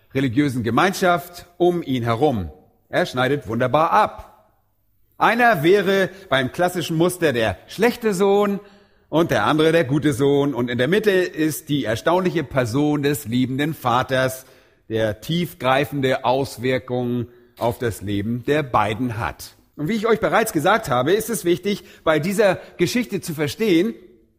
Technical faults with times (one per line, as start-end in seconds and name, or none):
none